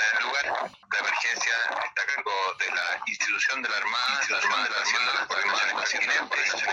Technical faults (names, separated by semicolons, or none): doubled audio track